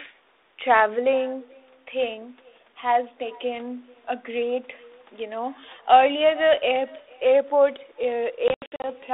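Throughout, a faint, thin copy trails every phrase by roughly 0.4 s at about 28 dB down: echo with no canceller, the far-end loudspeaker leaking into its microphone. Between 8.48 and 8.9 s, hard-edged gaps totalling 220 ms across 360 ms, the longest 80 ms, break the speech, which returns slightly distorted. This is packet loss on an ADPCM call, which throws the decoder's predictor out of step.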